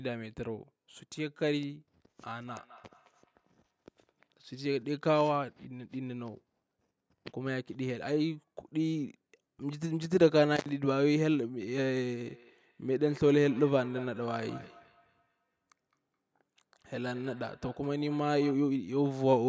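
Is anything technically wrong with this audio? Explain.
Yes. From 2.48 to 4.48 s, and again from 12.29 to 18.69 s, each word returns about every fifth of a second as a thin, ringing repeat, reaching about -26 dB and then about -20 dB below the speech. This is feedback echo between two devices: one device replays the other's microphone into the same room, and neither echo canceller removes it. From 10.56 to 10.69 s the sound cuts out for 63 ms, with crackle at either edge and faint hiss in the gap, which points to an intermittent contact in a cable or plug.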